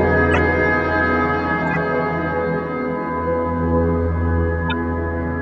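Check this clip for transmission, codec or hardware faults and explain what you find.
Three short bursts come from corrupt frames decoded: the decoder played frames with flipped bits, so misread gains and codes put energy at the wrong frequencies. This is heard as brief noisy chirps at 0.33 to 0.38 s, 1.65 to 1.77 s, and 4.68 to 4.73 s, peaking around -5, -10 and -15 dBFS respectively.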